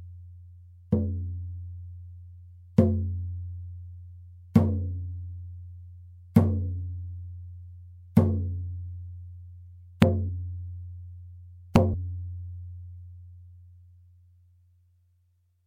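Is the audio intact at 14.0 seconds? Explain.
Yes, the audio is intact at 14.0 seconds, with no dropout, distortion or other fault at that moment.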